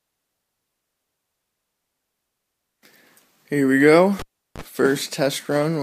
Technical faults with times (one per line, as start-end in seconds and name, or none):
4.19-4.62 cable pulled and plugged in